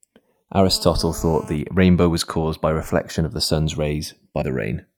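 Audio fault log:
throughout: channels drifting apart. The two channels behave as if captured on devices with independent clocks, out by roughly 200 ppm, so the delay between them creeps steadily and reaches about half a millisecond by the end. When the pair is summed to mono, that small, changing offset makes comb-filter notches that slide gradually through the spectrum, heard as a slow flanging sweep across the speech.
0.69–1.55 s: GSM phone buzz. A 2G handset close by, in an active call, is pulsing its radio at about 217 bursts per second, and the audio circuitry rectifies those pulses into the signal path. The result is a hard, raspy 217 Hz buzz loaded with harmonics, sitting about 19 dB below the speech, steady while it lasts and with no relation to the speech at all.
1.56–3.49 s: GSM signalling bursts. A phone in a call but with its user silent stops transmitting continuously and sends only short groups of bursts at the same 217 Hz rate. 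Each group is rectified into the audio, so instead of a steady buzz there are even ticks with a longer 217 Hz buzz twice a second, much quieter, around 35 dB under the speech.
4.40 s: compressed frames skipped. About two compressed frames, around 50 ms of audio with frames of 26.1 ms each, never reach the output, either absent from the stream or rejected by the decoder as corrupt. The speech jumps forward by that amount.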